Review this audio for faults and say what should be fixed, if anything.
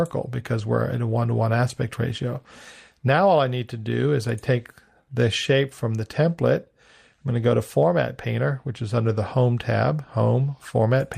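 Nothing here needs fixing; no faults are audible.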